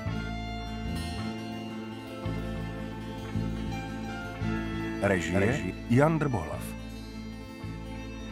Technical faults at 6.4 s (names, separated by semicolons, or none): none